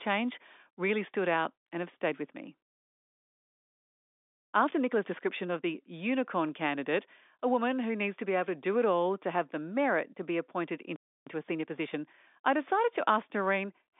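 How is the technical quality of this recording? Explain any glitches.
The recording has two interruptions, each followed by a hurried passage. The speech comes through a telephone-band G.711 channel, with nothing audible above about 3.8 kHz.

Playback stall: from 4.10 to 4.43 s and from 10.96 to 11.27 s, the speech cuts to silence for roughly a third of a second, then resumes. The likely cause is the player running short of buffered data or having its output thread blocked.

Time-compressed catch-up: from 4.43 to 5.73 s and from 11.27 to 12.49 s, the speech runs at 1.25 times normal speed with unchanged pitch. The player is trimming its backlog by removing short segments and cross-fading the joins.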